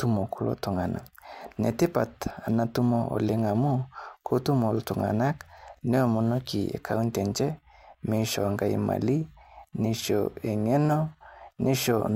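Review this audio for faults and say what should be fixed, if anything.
Nothing to fix: no faults found in the speech, so no corrective work is needed.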